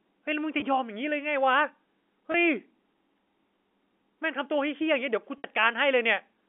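It's a speech recording over a G.711 telephone line, with the expected narrow 250 Hz to 3.4 kHz band, and it has packet loss with pitch repetition at three points. There are brief, slightly held, buzzy moments at 0.60–0.62 s and 2.32–2.34 s, each about 20 ms of missing audio, consistent with a single lost packet. At 5.38–5.44 s a longer 60 ms gap, roughly three packets' worth, is bridged by the receiver looping the last pitch period, which fades before the speech cross-fades back in.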